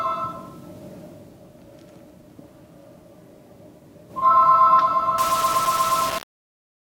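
From 5.18 s to the end at 6.86 s, the sounds in the clip take on a coarse, grainy distortion consistent with low bit depth without dither. The grit tracks the sound itself, thickening and thinning as the level moves, and quiet passages break up or sputter between steps. The likely cause is rounding to very few levels with no dither, which fits a 4-bit quantiser, putting the error only about 10 dB below the signal.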